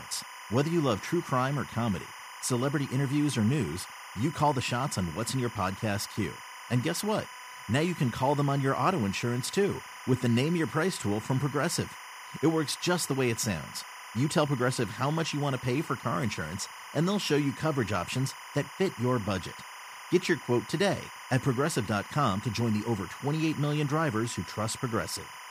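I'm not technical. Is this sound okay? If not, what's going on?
No, there's a steady chirping warble running under the speech from start to finish. That's timecode bleed: a sync signal from a nearby cable or track leaking in, flipping between two pitches around 1 and 2 kHz, ticking along at 25 frames a second.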